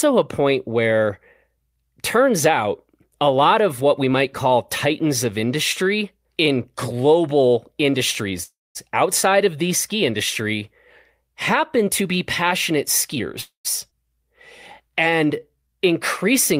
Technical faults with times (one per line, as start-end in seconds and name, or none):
8.43-8.77 call audio freeze
13.13-13.20 jitter buffer speed-up
13.41-13.67 call audio freeze
13.91-13.93 skip ahead
14.88-15.68 jitter buffer slow-down